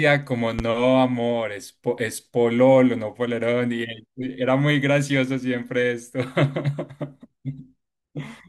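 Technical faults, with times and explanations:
0.59 to 0.62 s, loud pop: a single sharp pop sits on top of the speech, which carries on beneath it, peaking roughly 10 dB above the signal. It is likely a sudden voltage pulse, from static, a switch or a driver glitch, entering the chain.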